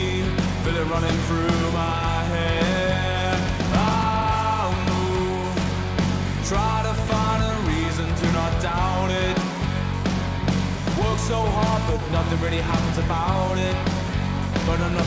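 Nothing faulty turns up; the audio has come through a call path whose content stops at 8 kHz, consistent with a G.722 wideband link at 64 kbps.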